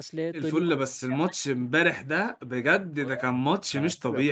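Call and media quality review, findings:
Speech suppressed in double talk, 0.54 s to end of clip. Level dips hard and breaks up, deepest drop around 40 dB. Likely echo canceller: unable to separate near-end talker from loudspeaker echo, so it attenuates both.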